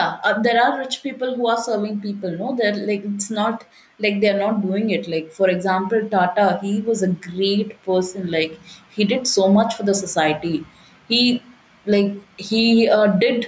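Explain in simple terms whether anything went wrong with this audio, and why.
Throughout the speech, the sound is squashed, with loud and soft parts pulled closer in level. This is gain pumping, likely from a limiter reacting to gain set too high.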